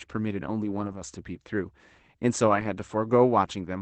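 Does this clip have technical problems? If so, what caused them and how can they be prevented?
Yes: lost packets were rebuilt from error correction at 0.59–1.05 s and 2.47–2.65 s. Low-bitrate Opus backup copies filled the gaps, leaving rough, noisy stretches where a spectrogram shows smeared harmonics instead of silent holes. Preventing it needs a more stable network path with less packet loss, or a higher bitrate so the redundant copies are cleaner.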